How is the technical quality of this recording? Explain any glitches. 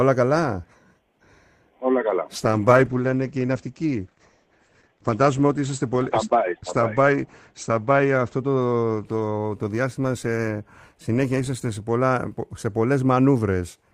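The recording has one clear glitch, a stretch of degraded, dulled audio in the middle. From 2.37 s to 11.09 s the sound turns muffled and coarse, losing its top end and taking on a rough, watery texture, at its worst for about 5.4 s before clarity returns. This is a call bitrate drop. The connection's bandwidth estimate fell, so the encoder had far fewer bits and coded more crudely, which fits a fall from about 32 kbps to 11 kbps. It also narrowed the audio band from 20 kHz to 8 kHz.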